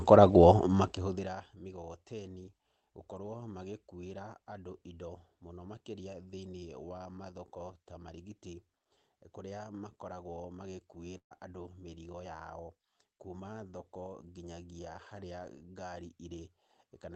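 A burst of packet loss runs from 11.17 to 11.33 s, just before "andũ mĩrigo". Around 140 ms of audio never arrived in time, so the receiver filled about 132 ms by extending the last sound and fading it down, leaving roughly 100 ms near silent before the speech picks up again further along. The result is a brief held sound sinking into a hush and a small skip. The call codec's top end stops near 8 kHz, consistent with Opus at a low bitrate.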